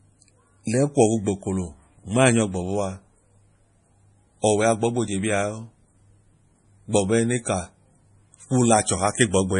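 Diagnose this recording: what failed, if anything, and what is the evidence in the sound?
The codec stage is the likely culprit: heavy MP3 compression throughout, consistent with a low bitrate near 32 kbps. The treble stops dead at 10.5 kHz, and starved of bits, the encoder drops weak frequency lines frame by frame, leaving the speech watery and swirling with metallic s sounds.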